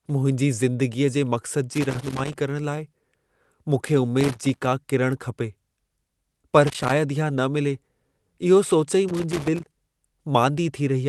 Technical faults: loose connector crackle

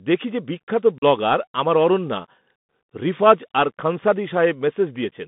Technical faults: Bluetooth CVSD headset codec; unconcealed Bluetooth headset packet loss

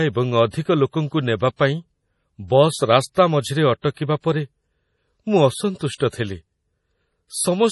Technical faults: MP3 compression

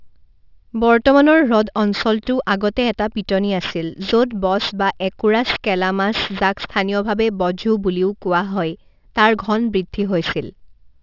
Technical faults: aliasing

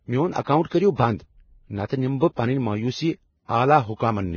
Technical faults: Vorbis compression; pre-echo

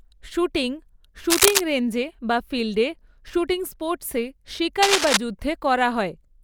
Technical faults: cable scratch noise

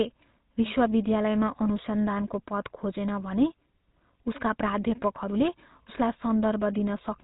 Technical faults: GSM full-rate codec

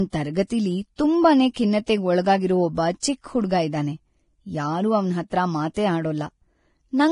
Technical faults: Vorbis compression

